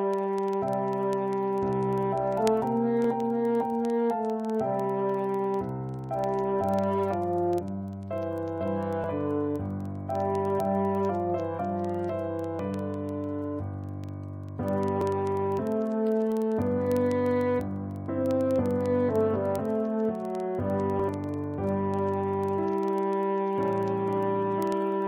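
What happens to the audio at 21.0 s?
At 21.00 s there is an overlap between stream segments: two 6-second segments' time stamps overlap, the player trims audio that wasn't duplicated, and the waveform jumps abruptly. It sounds like a click or tiny skip, visible as a waveform discontinuity and a thin vertical broadband line on a spectrogram.

Under this, word clock ticks continue from 0.14 s to the end. A clock mismatch of roughly 500 ppm drops or repeats one sample about every 50 ms, producing sharp, uneven ticks that show as a comb of vertical lines.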